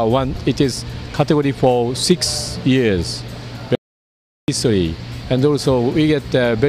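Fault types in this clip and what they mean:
Audio dropout to silence: The input signal was most likely lost for a moment, through a disconnected device, a broken link or an unintended mute, while the recorder kept writing silence. The sound stops abruptly at 3.75 s and returns just as abruptly at 4.48 s, leaving about 0.73 s of total silence with no background or room tone. Whatever occurred in that stretch is missing from the recording.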